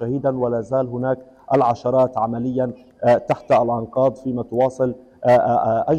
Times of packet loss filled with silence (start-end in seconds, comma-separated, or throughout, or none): none